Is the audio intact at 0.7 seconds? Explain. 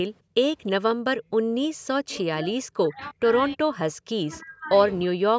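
No: an echo leak at 0.66–0.71 s, a faint delayed copy of the speech 316 ms late, likely from a loudspeaker side's echo canceller letting its microphone pickup through.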